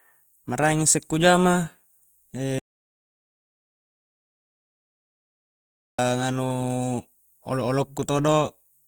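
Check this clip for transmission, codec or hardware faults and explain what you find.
Two faults are audible: codec damage across the whole recording and one long dropout.

Opus compression runs throughout. The encoder likely ran in its CELT music mode at a low rate, consistent with about 24 kbps, keeping each band's energy but filling starved bands with folded or noise content. The bandwidth stays full, reaching about 20.1 kHz, yet the speech sounds plainly grainy and rough.

An audio dropout to silence runs from 2.59 s to 5.99 s. The input was likely lost, through a disconnected device or failed link, while silence kept being written. Speech cuts off abruptly and returns mid-flow, with about 3.4 s of complete silence and no room tone.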